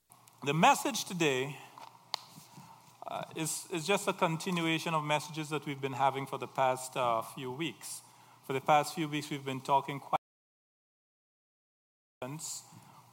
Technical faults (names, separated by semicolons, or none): audio dropout to silence